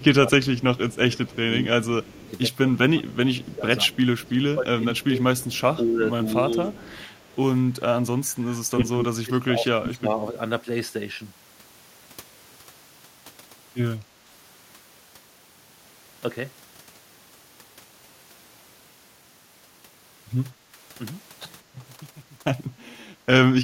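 Speech with two call-processing faults. From 0.0 to 7.28 s a faint second copy of the speech trails the original by 197 ms at about 25 dB below it, and a louder scrap, about 10 dB down, returns at 8.81 to 8.85 s. This echo leak is likely the far end's echo canceller missing part of its loudspeaker pickup and sending it back. The speech also dips in pieces between 0.0 and 10.35 s, by roughly 15 dB at worst and for around five seconds in total. A milder dip of about 5 dB, lasting only a fraction of a second overall, recurs between 20.73 and 23.23 s. This is speech suppressed in double talk, likely from the echo canceller failing to tell the talker from the loudspeaker echo while both sides spoke and turning both down.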